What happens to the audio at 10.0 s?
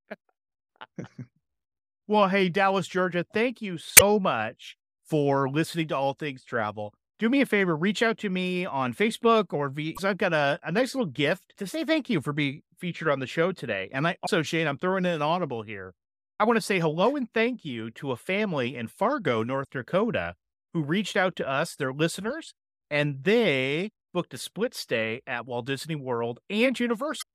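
Just before 10.0 s, from 9.94 to 9.99 s, there is damaged data in the compressed stream, right after "or via" and before "I've got a a". For about 50 ms the decoder is handed corrupted frames, misreads them and loses sync until it locks onto a valid frame header again, producing a brief chirp or squawk. On a spectrogram it shows as a short, sharp-edged block of broadband or tonal garbage. The waveform shows a sudden, unnatural segment.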